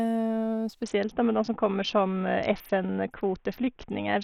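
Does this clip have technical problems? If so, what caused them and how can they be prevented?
Yes. A Bluetooth SBC bit pool drop runs from 0.83 s to the end at 4.24 s. The speech turns dull and gritty as the link starves the encoder, which fits the bit pool falling from 28 to 6, roughly 60 kbps. The upper sub-bands lose their bits and the rest are coarsely quantised. Keeping the Bluetooth link uncongested, with the devices close and free of 2.4 GHz interference, prevents it.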